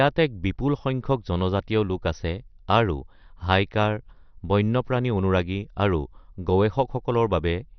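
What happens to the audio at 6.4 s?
At 6.4 s the speech carries the same heavy damage heard throughout the clip, likely MP2 compression at a low bitrate near 48 kbps. Starved sub-bands drop out, so the spectrogram shows nothing above 6.1 kHz and flickering upper bands, heard as dull, gurgling, granular speech.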